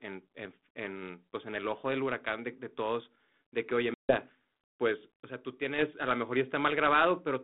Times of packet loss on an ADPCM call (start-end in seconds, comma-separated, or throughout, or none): 3.94-4.17